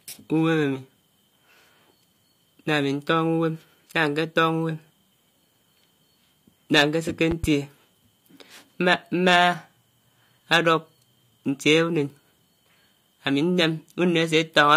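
A loud pop at 7.31 to 7.46 s: two sharp pops, a few decibels above the speech, which continues beneath. A voltage pulse from a switch or static is likely.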